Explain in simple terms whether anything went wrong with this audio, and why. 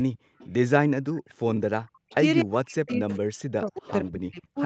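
Several problems from a speakerphone call can be heard. First, echo leak: a faint copy of the speech arrives about a quarter of a second late at 0.0–0.49, 1.28–1.35, 1.87–2.15, 2.88–3.17 and 3.87–4.11 s, quiet at first and noticeably louder in the last two. This is likely the far end's echo canceller letting loudspeaker sound back into its microphone.

Second, background gated by the echo canceller: from 0.19 to 0.38 s the room sound nearly vanishes for about a fifth of a second, then returns. The canceller clamped the microphone down hard while its loudspeaker was playing, taking the background with it.

Third, speech suppressed in double talk: between 2.05 and 4.58 s the speech repeatedly dips almost to silence, adding up to roughly one and a half seconds. Both sides were likely talking at once, and the canceller turned everything down rather than separate them.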